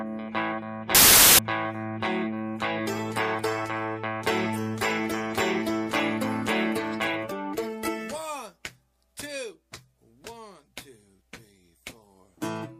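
From 0.95 to 1.39 s there's a burst of loud, harsh broadband noise, a case of samples built from the wrong bytes. The reader assembled each sample with its bytes misaligned or swapped, so the jittery low-order bits ended up dominating and swamped the actual sound.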